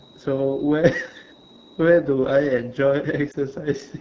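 Throughout, the speech carries AMR wideband (HD Voice) codec damage. It sounds plainly rough and raspy, which fits one of the lowest AMR-WB rates, near 8.85 kbit/s.

From 3.31 to 3.36 s comes a lost AMR speech frame. The decoder repeats the previous frame's settings at falling gain, giving a brief dip or warble.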